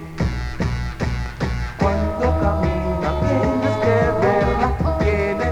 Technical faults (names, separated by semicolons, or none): none